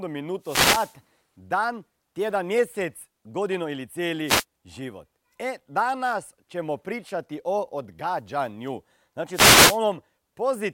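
Speech with three wireless microphone noise hits, at 0.41–0.96 s, 4.26–4.44 s and 9.32–9.79 s: bursts of static as the FM radio link fades under multipath cancellation.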